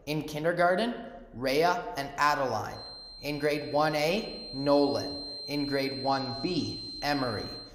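From 2.67 s to the end, a thin, steady whistle at 4.2 kHz sits well below the main sound, roughly 15 dB down, and swells and fades slowly in level. This is a feedback whistle, likely a loudspeaker-to-microphone loop held right at the edge of oscillation, so a single frequency rings on without building up. On a spectrogram it appears as a narrow horizontal line at 4.2 kHz. On the waveform it adds only a faint fuzz.

Between 6.09 and 7.00 s the treble goes dull and a gritty, granular noise rises, then clears as quality returns. This is a Bluetooth SBC bit pool drop. The link cut the bits available for each frame, so the highest sub-bands received almost nothing and the remaining bands were quantised coarsely. The sound suggests the bit pool fell from 28 to around 12, near 96 kbps. On a spectrogram the upper bands thin out or vanish in blocky steps for that stretch, with speckled noise across the lower bands, while the waveform envelope changes little.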